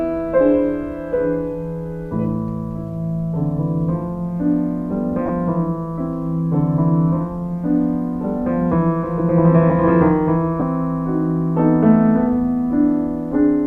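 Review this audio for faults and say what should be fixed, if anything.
Lost LE Audio frames at 5.26–5.30 s (30 ms, consistent with four 7.5 ms frames) and 10.60–10.62 s (15 ms): the decoder refilled the gaps with noisy, sign-scrambled spectrum rather than clean silence or clicks. Improve Bluetooth link margin or buffering so frames arrive intact.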